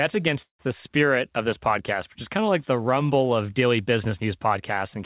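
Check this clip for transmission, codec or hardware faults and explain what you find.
One transmission fault stands out. Call audio freeze, 0.42 to 0.68 s: packets likely stalled and the jitter buffer emptied, so a fading buzz or hiss, then silence, fills about 170 ms before the sound resumes intact.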